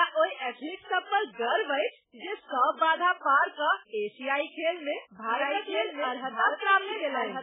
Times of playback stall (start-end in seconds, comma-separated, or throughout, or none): none